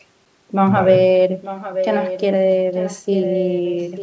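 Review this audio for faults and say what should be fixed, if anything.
Echo leak at 1.42–2.22 s and 2.74–4.02 s: a copy of the speech returns about 0.89 s late, roughly 10 dB down, likely loudspeaker pickup the far end's echo canceller missed. Prevent it by having the far end use a headset or improve its echo cancellation.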